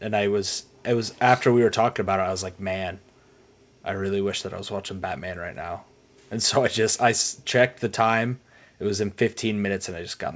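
No technical faults can be heard.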